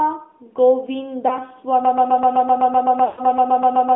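Speech, carried throughout by the AMR narrowband mobile codec. The audio is confined to a band of roughly 250 Hz to 3.6 kHz, and the codec damage is plainly audible: a buzzy, synthetic edge where the vocal-tract model and sparse pulse excitation stand in for the real signal. That degree of coarseness fits a mid-rate mode near 10 kbps. On a spectrogram everything above 3.6 kHz is empty, with a hard ceiling across the whole clip and a thin floor below 250 Hz.

Between 1.28 and 1.39 s there is a brief dip and warble from lost AMR speech frames, which fits a single 20 ms frame failing its checksum. The decoder bridges the gap by reusing its last good pitch and filter settings at reduced gain. A second, longer episode runs from 3.06 to 3.21 s, consistent with about six lost frames (120 ms). There the sound stretches out and fades toward silence before returning weak or rough. The waveform shows a short amplitude sag at the first spot and a tapering envelope at the second. 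The spectrogram shows smeared, repeated harmonic bands.

From 1.85 s to the end, a broken-record loop takes over. A 0.13 s fragment repeats back to back 17 times, and whatever should have played in that time is gone. The likely cause is a player, encoder or stream stall that kept resending its last buffered piece. The waveform shows an identical short pattern tiled end to end, and the spectrogram shows vertical stripes at a steady 0.13 s spacing.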